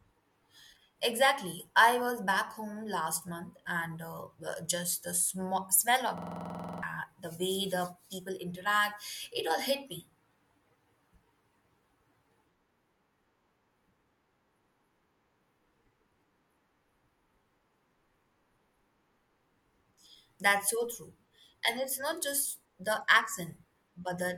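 From 6.18 to 6.83 s the system hung while the sound hardware kept replaying its ring buffer, a system hang loop. One 46 ms fragment of the speech, which fits a 2048-sample buffer, repeats 14 times at 21.5 Hz, a rapid mechanical rattle, and roughly 0.7 s of speech is lost.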